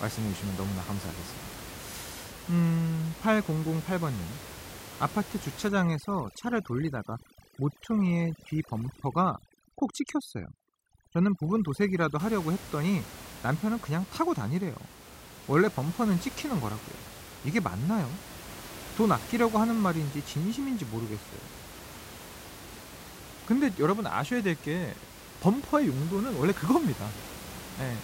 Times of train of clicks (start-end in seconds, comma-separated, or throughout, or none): none